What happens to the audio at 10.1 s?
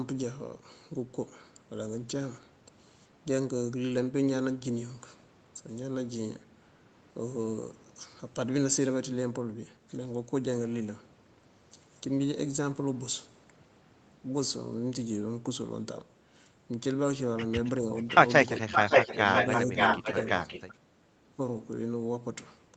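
Nothing goes wrong at 10.1 s: the speech there is intact, with only the normal call microphone processing at work, which trims the lowest bass and leaves nothing above 8 kHz.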